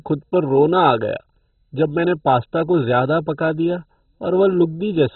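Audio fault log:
Throughout, MP2 compression: the speech sounds dull and gurgling, with a granular, watery roughness, and nothing is left above about 4.1 kHz. The likely cause is MPEG Layer II coding starved of bits, which fits a rate near 16 kbps. Upper sub-bands are switched off and the rest coarsely quantised. On a spectrogram, energy stops at a hard ceiling near 4.1 kHz, with blocky patches flickering beneath it.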